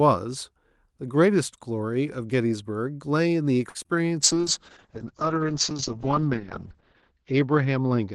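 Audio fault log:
3.69–3.77 s, short stall from a late packet: A packet reached the receiver after its playout time, so the jitter buffer emptied and the decoder had nothing new to play. It held the last sound for about 54 ms until the packet turned up, then resumed from the same point. Nothing of the speech is lost, but that sound lingers unnaturally long with a faint buzz or dip, and everything after it now plays about 54 ms later.
3.83 s and 3.87 s, short concealed packet loss: Two consecutive 20 ms stretches of speech never reached the Opus decoder in time. Each gap was covered by extending the preceding sound, continuing its pitch where it was voiced and using shaped noise where it was not, then crossfading back into the real signal. Heard back to back, the two patches form a brief smear or wobble a little after the stall, and a short consonant there may simply disappear.
4.22 s to the end, call bitrate drop: The call's bandwidth estimate collapsed, and the Opus encoder was pushed from 32 kbps down to 7 kbps, staying at the lowest rate for about 2.6 s. 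With so few bits, each frame is coded coarsely, and the audio band shrinks from 12 kHz to 8 kHz. The speech turns rough and watery, and it loses its crisp upper range, sounding muffled.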